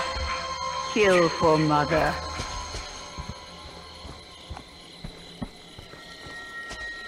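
No technical faults can be heard at any point, so there is nothing to describe in time order.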